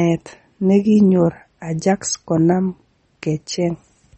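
A speech recording, likely squeezed through low-bitrate MP3 compression, consistent with about 32 kbps, throughout: treble is cut off above 8.4 kHz, leaving plainly audible watery, swirling artefacts.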